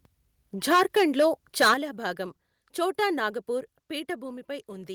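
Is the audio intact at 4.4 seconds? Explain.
Yes, the speech is intact at 4.4 seconds, with no fault at that moment.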